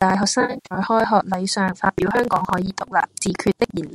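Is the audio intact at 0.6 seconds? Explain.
No. From 0.41 to 0.79 s there is AAC frame loss with concealment. About 250 ms of audio drops out in scattered gaps, the longest around 70 ms. The decoder patches each gap from the last good spectrum. These patches sound smeared, noisy or phasey.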